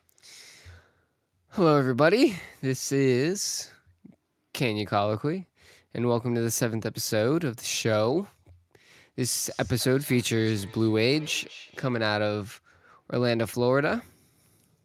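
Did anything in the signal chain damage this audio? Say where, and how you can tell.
Yes, call processing: feedback echo between two devices, 9.49–12.0 s. One device replays the other's microphone feed, so words recur roughly every 200 ms, about 21 dB down, as evenly spaced spectrogram ghosts.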